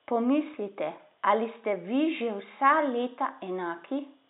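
No technical faults are audible.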